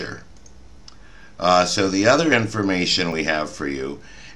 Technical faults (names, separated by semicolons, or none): dropped buffer (overrun)